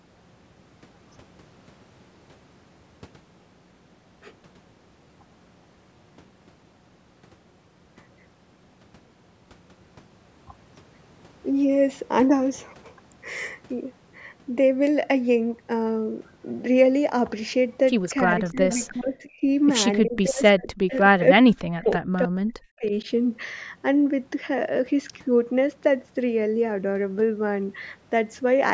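Between 18.25 and 19.42 s the echo canceller likely mistook overlapping talk from both ends for its own loudspeaker echo and turned the near voice down. This is speech suppressed in double talk: the level dips by about 20 dB in patches adding up to roughly 0.7 s. From 20.0 to 23.09 s the same suppression returns more severely, cutting about 40 dB deep over roughly 1.5 s so that stretches nearly vanish.

Inside those stretches an echo leak is heard, likely because one side's canceller on a loudspeaker phone left part of the returning signal in its microphone feed. A faint copy of the voice arrives 320 ms late, about 25 dB below the speech. It sounds like a brief scrap from 18.47 to 18.85 s and again from 20.91 to 20.97 s.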